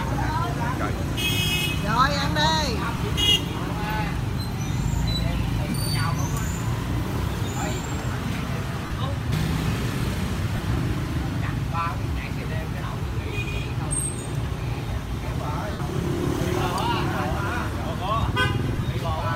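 Lost LE Audio frames at 2.97, 5.70, 8.85, 10.56, 15.73 and 18.76 s, gaps of 22.5 to 67.5 ms. The decoder patches each one with a reused, sign-scrambled spectrum, so it comes out as a brief noisy smear.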